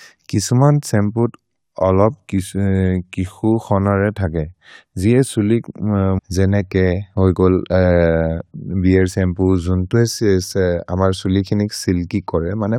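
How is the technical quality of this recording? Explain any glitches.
There is one glitch in this speech recording. From 6.17 to 6.19 s the sound jumps abruptly forward, with a brief blip at the join where the flow of speech breaks discontinuously instead of carrying on. This is likely a stream segment skipped: one chunk of the segmented stream failed to load, so the player dropped it and carried on with the following segment. Everything in the missing chunk is gone, and the two sides of the gap butt together.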